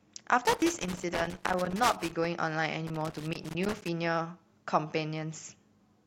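From 0.45 to 2.25 s, and again from 2.87 to 3.89 s, the speech is broken up by loose connector crackle. A worn or dirty contact is intermittently opening and closing, chopping the signal, heard as irregular scratchy bursts. On a waveform the signal shows jagged dropouts and sharp spikes; on a spectrogram, scattered vertical broadband streaks across both spans.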